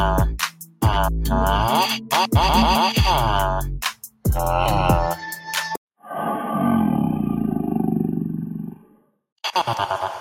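Throughout, the level pumps and flutters by around 5 dB as held parts sink: a speech noise suppressor left on is treating steady sound as noise. At 0.5 to 0.82 s, 3.94 to 4.26 s and 8.6 to 9.11 s, the sound dips by up to about 12 dB, cut hardest by that suppressor.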